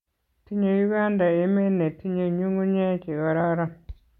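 A speech clip with no technical faults to report.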